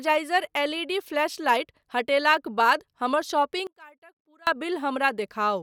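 A polarity flip on one stereo channel is the likely cause of the one channel inverted fault in this speech recording, from 3.67 to 4.47 s, just after "फ्लैशलाइट हटेलाक बाद हमर". With one side reversed, anything common to both channels cancels when they are summed to mono, so the centred speech collapses by about 29 dB. For those 0.8 s only a faint residue of the difference between the channels remains before full level returns.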